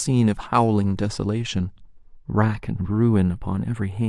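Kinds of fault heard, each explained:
Channels drifting apart: the two channels of this speech run on clocks about 20 ppm apart, so their relative delay grows steadily, to roughly a tenth of a millisecond by the end. Summed to mono, comb notches sweep slowly downward through the treble, giving slow flanging.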